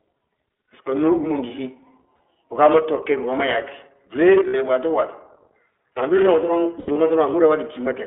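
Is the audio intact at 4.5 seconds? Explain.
No. From 4.48 to 4.56 s, just before "waato waati", the sound turns into a held, slightly buzzy, breathy vowel for about 60 ms. These are lost iLBC frames: the decoder filled the gap by repeating the last pitch cycle mixed with noise, and the span fits three 20 ms frames. Because each frame decodes independently, the sound recovers at once.

The whole clip, including this moment, also carries the iLBC codec. The sound is confined to roughly 300 Hz to 3.4 kHz and has a plainly rough, synthetic edge. This matches a 15.2 kbps narrowband coder that rebuilds the excitation of each 20 ms frame separately.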